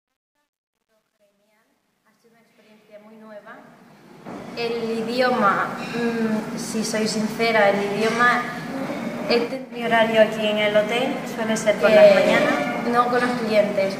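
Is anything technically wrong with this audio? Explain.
Yes. From 0.0 to 5.4 s there is truncation distortion on a fade. As the fade-in rises, the gain stage rounds each sample to too few levels with no dither, which points to a word length of about 11 bits. At low level the waveform collapses into coarse square steps, so the quietest part, from 0.0 to 3.49 s, sounds gritty. The roughness eases as the level rises toward 5.4 s.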